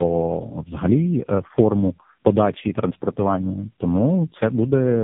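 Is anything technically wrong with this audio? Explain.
Yes. Tandem speech coding runs through the whole clip. The speech sounds like it passed through three low-rate speech codecs in a row, each re-encoding the last one's damaged output. The errors stack up. The voice is rough, muffled and warbly, with nothing above 3.7 kHz.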